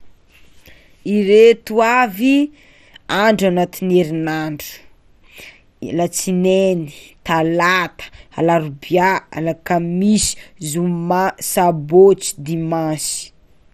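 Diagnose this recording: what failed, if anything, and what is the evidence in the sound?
The codec stage failed, likely MP2 compression at a rate fitting about 64 kbps. Bit-starved sub-bands leave the speech dull and gurgling throughout, with nothing above 15 kHz.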